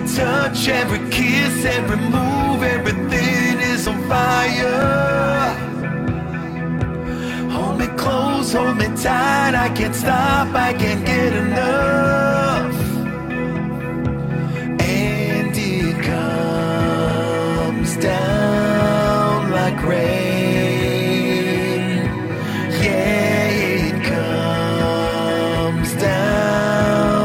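Overlap between stream segments causes a small click or skip at 0.89, 1.89, 2.86, 3.87, 4.82, 5.82, 6.79 and 7.80 s, about once per second. Overlapping segment timestamps made the player trim roughly 24 to 42 ms of audio that wasn't actually duplicated, so the waveform jumps.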